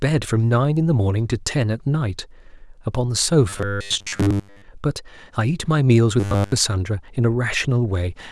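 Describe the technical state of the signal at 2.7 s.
At 2.7 s the speech signal is intact, with no audible technical fault at that moment.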